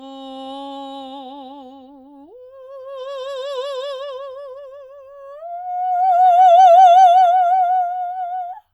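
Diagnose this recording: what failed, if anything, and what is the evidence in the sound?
Listening to the music, nothing stood out that would point to a failure at any stage of the chain.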